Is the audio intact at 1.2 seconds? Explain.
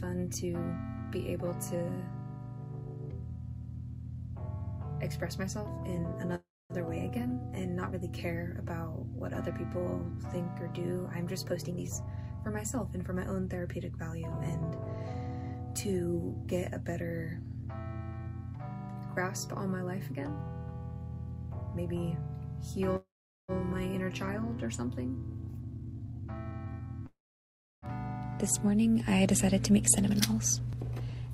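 Yes, the audio is intact at 1.2 seconds, with no dropout, click, distortion or other fault to be heard there.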